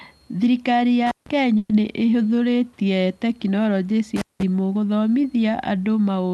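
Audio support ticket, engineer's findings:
Intermittent contact, 1.07 to 1.29 s. Dropout with crackle at both edges, line open about 150 ms. Faint hiss in the gap. Probable component: loose cable or plug. Contact briefly breaks, signal path opens.

Intermittent contact again, 4.16 to 4.43 s. Same signature. Crackle on break and remake, open about 185 ms. Loose cable or plug likely. Recurring fault, not a one-off. Reseat or replace the cable.

Burst of packet loss, 1.57 to 1.71 s. Speech stretched into a held, fading tail for 120 ms, then resumes further on. About 120 ms of speech missing. No hard silence. Receiver concealment filled the gap. Network side, consecutive packets lost or late.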